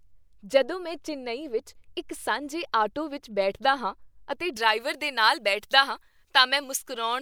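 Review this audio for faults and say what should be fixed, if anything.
From 4.57 s, just after "ਵਿੱਚ ਬੈਠਦਾ ਹਾਂ ਅਤੇ", to the end at 7.22 s, pre-emphasis is left on: the treble boost was never undone by its matching de-emphasis, leaving 10 kHz about 11 dB hot relative to 1 kHz, consistent with a J.17-type curve. The speech turns thin, bright and sibilant. Apply the complementary de-emphasis filter to that section, and confirm emphasis flags are honoured at each decode or transfer stage.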